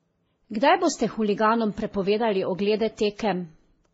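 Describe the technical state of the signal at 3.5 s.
At 3.5 s the speech shows transcoding between lossy codecs, present across the whole clip. Nothing reaches above 7.7 kHz, and the artefacts of the different codecs are heard together, which fits a low-bitrate MP3 likely re-encoded through Vorbis and then WMA.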